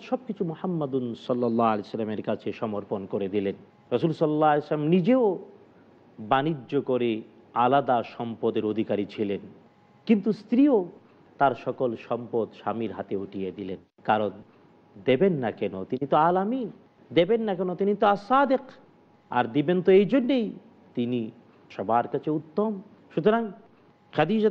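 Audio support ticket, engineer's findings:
No faults found on listening.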